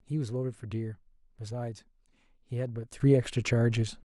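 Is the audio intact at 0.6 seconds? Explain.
Yes, at 0.6 seconds the speech plays through intact, with no audible fault at that moment.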